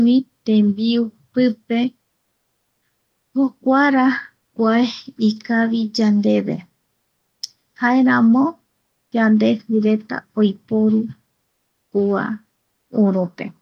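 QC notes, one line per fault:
No faults found in the speech.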